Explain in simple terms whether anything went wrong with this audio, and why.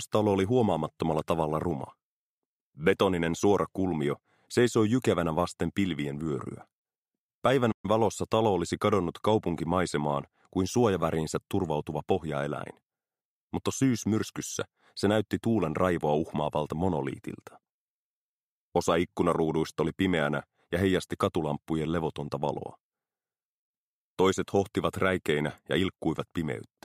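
At 7.72 seconds the sound abruptly cuts to silence for just over a tenth of a second, then picks up again at 7.85 s. This is a playback stall: the player most likely ran short of audio data, or was briefly held up, and went quiet until it caught up.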